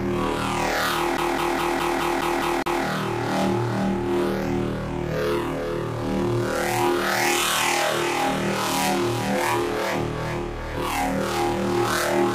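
From 1.17 s to 2.83 s the audio is caught in a CD stuck on one turn: a scratch keeps knocking the laser back a track, so the same 0.21 s segment plays eight times, each with a brief mute at the jump. The waveform shows identical repeating blocks separated by gaps, and the spectrogram shows matching vertical stripes.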